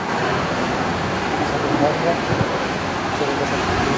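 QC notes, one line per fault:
Throughout: channel delay (doubling). Every syllable of the speech arrives twice, a second copy trailing the first at equal level like a tight slap echo. One channel runs about 85.33 ms late, which fits a 4096-sample buffer, and both channels are summed to mono.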